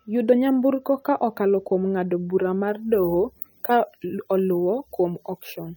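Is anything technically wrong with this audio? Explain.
Yes, there are two faults. Throughout the clip, MP3 compression is the likely cause of plainly audible codec damage. Nothing is present above 18.7 kHz, and the speech has a watery, swirling texture with chirpy sibilants, which fits a low bitrate near 48 kbps. At that rate the encoder discards weak frequency detail frame by frame.

From 2.68 s to the end, just after "okalo kuom ng'ado bura", there is pre-emphasis left on. The treble boost, matching a 75 µs FM curve, was never undone, so 10 kHz sits about 14 dB above 1 kHz. The speech turns thin, bright and hissy on s sounds.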